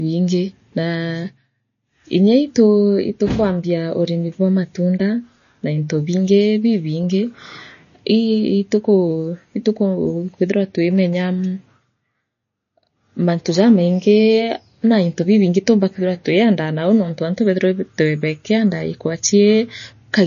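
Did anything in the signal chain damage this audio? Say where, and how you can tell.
Yes. Throughout the speech there is a watery, swirling texture, s sounds chirp metallically, and nothing is heard above 6.9 kHz. That points to the codec stage, likely MP3 compression at a low bitrate such as 32 kbps, cutting the treble and switching weak frequency lines on and off between frames.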